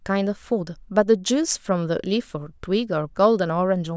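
A short speech recording, with nothing technically wrong with it.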